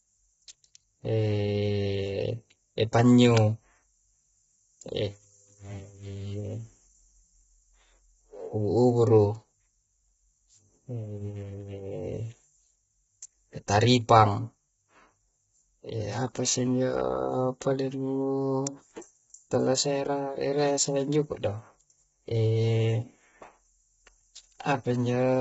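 The whole clip has the rough, grainy texture of heavy low-delay AAC compression, most likely AAC-ELD squeezed to a bitrate that sounds like roughly 16 kbps. The low bitrate leaves too few bits to code the voice cleanly, so noise fills the gaps between its harmonics, and nothing comes through above 7.7 kHz.

Then there's a sharp, isolated snap at 3.37 s and another at 18.67 s, each over almost instantly. They sound like electrical switching spikes, likely a nearby switch or static discharge arcing into the audio line and landing right on top of the sound.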